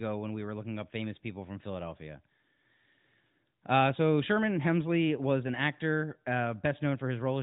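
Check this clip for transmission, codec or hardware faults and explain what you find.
Nothing faulty can be heard in this speech.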